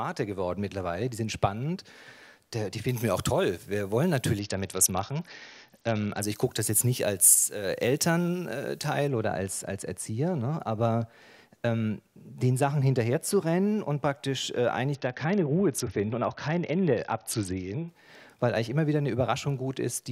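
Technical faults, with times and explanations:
2.89–9.08 s, pre-emphasis left on: the treble is raised about 14 dB at 10 kHz, matching an uncorrected 75 µs FM curve, so the sound turns thin, bright and hissy.
4.39–6.23 s and 14.95–17.88 s, Bluetooth SBC bit pool drop: the treble dulls and gritty noise rises, which fits the bit pool falling from 28 to 7, near 66 kbps, starving upper sub-bands.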